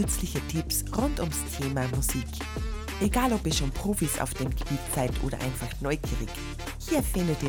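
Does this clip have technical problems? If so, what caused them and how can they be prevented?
No, this clip has no technical problems, so there is nothing to trace to a cause or prevent.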